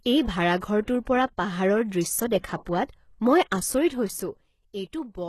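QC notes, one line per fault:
throughout: HE-AAC compression. The treble is plainly damaged and nothing survives above 12.4 kHz, which fits the likely cause: an HE-AAC encode at a low rate, around 16 kbps. The encoder kept only the lower spectrum and rebuilt the top by copying lower bands upward under a coarse envelope. That synthetic treble does not match the original, so harmonics fail to line up across the crossover and s sounds come out gritty, metallic or lispy.
0.57–0.62 s, 0.83–0.88 s, 2.65 s: pre-echo. The codec spread each block's quantisation noise across the whole block, so noise sized for a sharp attack also filled the quiet moment ahead of it. A hiss precedes the attack by about 49 ms and 50 ms in the first two events, both just before "পৰা পাহাৰৰ দৃশ্য দেখা", and by about 10 ms at 2.65 s, just after it. Each attack sounds soft and smeared.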